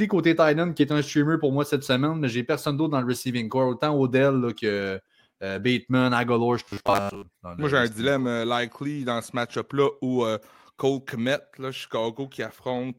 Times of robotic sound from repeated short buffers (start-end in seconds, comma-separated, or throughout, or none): 6.64-7.24